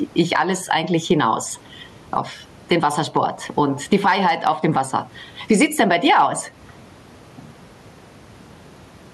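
It's a speech clip with gain pumping all the way through. The gain swings by something like 15 dB, ducking whenever the voice comes back in, so loud and quiet passages sit squashed close together in level. The likely cause is the input gain set far too hot, with a fast limiter or compressor clamping down on each loud syllable. The room noise itself sits about 42 dB below the speech.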